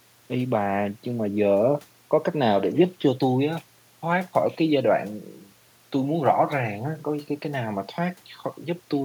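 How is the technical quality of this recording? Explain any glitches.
The technical quality of this recording is good, with no glitches to explain.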